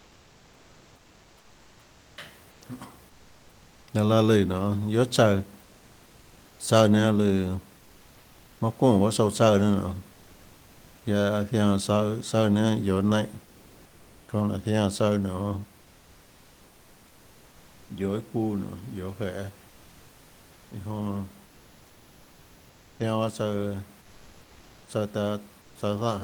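Speech in which the sender likely used Opus discontinuous transmission during pauses, so comfort noise replaces the background at 0–2.17 s, 2.51–2.61 s, 3.09–3.87 s, 5.63–6.59 s, 24.01–24.87 s and 25.61–25.75 s. The real room noise, about 31 to 34 dB below the speech, becomes a steady, featureless synthetic hiss, at most about 2 dB quieter.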